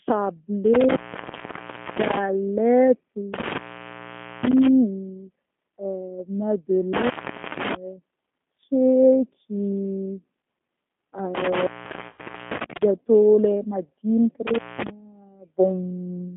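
Across the whole clip the speech has G.729 codec character: a line band of roughly 150 Hz to 3.5 kHz and plainly audible rough, synthetic texture, which points to an 8 kbit/s G.729A stream. It is steady throughout, unlike the events below, which come and go.

An intermittent contact breaks the line four times, from 0.74 to 2.18 s, 3.34 to 4.67 s, 6.93 to 7.75 s and 11.35 to 12.83 s. The signal drops out for about 1.0 s, 0.86 s, 0.47 s and 0.85 s respectively, leaving faint hiss, with crackle at each opening and closing. That edge crackle marks a physical connection fault rather than a network one.

Inside the last contact event, from 12.08 to 12.22 s, there is VoIP packet loss concealed by the speech codec: about 100 ms of audio is lost. The decoder fills it by extrapolating from the last speech, stretching it into a buzzy tone or coloured noise that fades. Because each frame builds on the one before, the sound stays weak briefly after the packets return.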